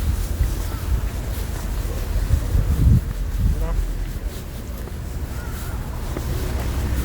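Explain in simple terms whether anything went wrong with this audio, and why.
Nothing went wrong here.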